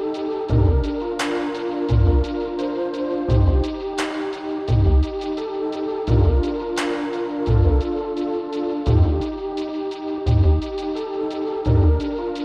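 Nothing stood out on listening to the clip.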